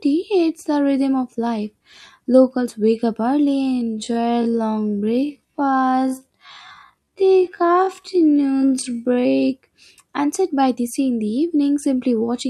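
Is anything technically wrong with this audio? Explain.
Yes, there's a time-stretched section from 3.59 to 9.37 s. The speech abruptly slows to about 0.53x speed while the pitch stays put, so it drags. It's likely software stretching the audio by repeating short pieces to preserve pitch.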